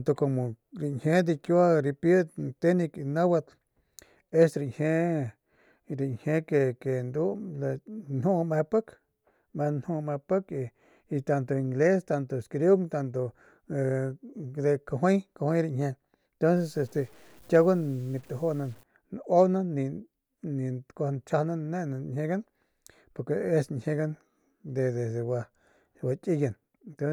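From 16.57 to 18.83 s the speech turns grainy and rough. The grit rises and falls with the voice, with error sitting only about 35 dB below it. The likely cause is low bit depth without dither, with samples truncated to roughly 8 bits.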